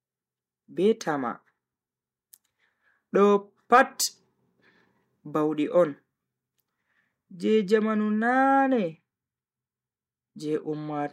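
No technical faults can be heard anywhere in the recording. The speech runs without any break or disturbance in the signal.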